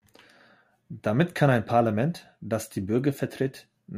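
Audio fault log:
No technical fault can be heard anywhere in the signal.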